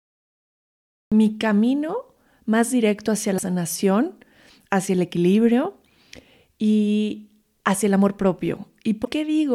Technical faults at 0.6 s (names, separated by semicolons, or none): cut-off start